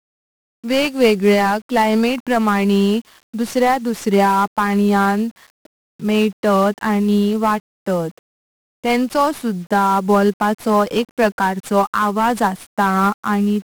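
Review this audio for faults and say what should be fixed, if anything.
Throughout the speech, 1-bit DFPWM compression adds heavy fuzz and crackle. Each sample steers one adaptive level, burying treble in hiss. The density fits about 48 kbps. Prevent it by encoding with a multi-bit codec instead.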